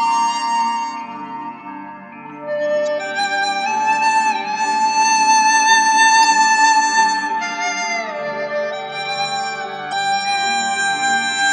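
Damaged data in a compressed stream breaks the sound at 2.86 s, from 6.21 to 6.25 s and from 9.89 to 9.93 s. The decoder misreads corrupted frames and loses sync, giving a brief chirp, squawk, click or short hole at each point.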